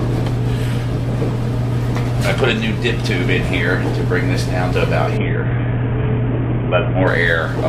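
At 5.17 s the audio shows a Bluetooth SBC bit pool drop. The treble goes dull and a gritty noise rises under the sound. It lasts about 1.9 s and clears at 7.07 s. The link was congested, so the sender cut the data it spent on each frame. The sound points to a bit pool falling from 31 to 5, about 50 kbps. The upper sub-bands lost their bits, and the lower ones were coarsely quantised.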